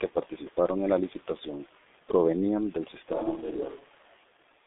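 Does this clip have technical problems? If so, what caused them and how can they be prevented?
Yes. G.723.1 codec, throughout: the 6.3 kbit/s, 30 ms-frame coding confines the sound to roughly 250 Hz to 3.6 kHz, with nothing above 3.8 kHz, leaving speech heavily muffled and hoarse with smeared consonants as the slow voice model lags behind. Prevent it by using a wideband codec such as Opus at a higher bitrate.

Switch to a distant microphone, from 3.13 to 4.17 s, right after "la licitación provenían del": the voice suddenly turns roomy and hollow with thinner bass and faint background noise, though at much the same level, likely because the close microphone dropped out and a farther one took over. Prevent it by securing and monitoring the close microphone's connection.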